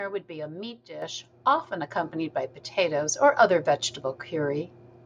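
At 1.02 s, just after "would be a meat", the microphone volume stepped up: the level of the whole signal jumps by about 8 dB in a single step, mid-speech. The call software judged the microphone input too quiet and raised the device's input volume at once instead of ramping it. Because the change happens before any processing, the voice and the background noise get louder together, and the level stays at the new setting afterwards.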